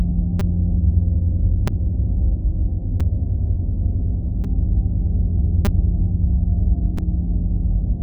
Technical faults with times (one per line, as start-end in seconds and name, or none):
0.40 repeated buffer
1.68 repeated buffer
3.00 repeated buffer
4.44 repeated buffer
5.65 repeated buffer
6.97 repeated buffer